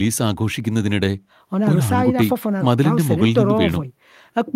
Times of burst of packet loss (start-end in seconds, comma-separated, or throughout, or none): none